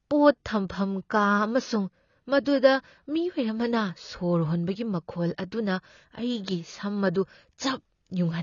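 AAC compression runs through the whole of this speech clip, likely from AAC-LC at a low bitrate, which fits about 24 kbps: nothing survives above 6.9 kHz, so sibilants turn dull and smeared, and coarse quantisation leaves a plainly audible warbling, fizzy texture.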